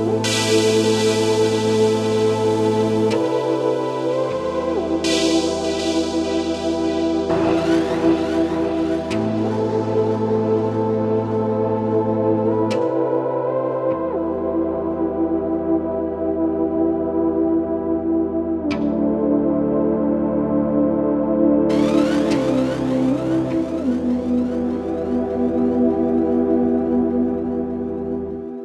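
No technical faults can be heard anywhere in this recording. The audio runs without any break, distortion or other disturbance.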